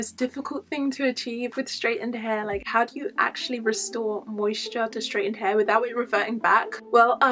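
No technical faults are audible.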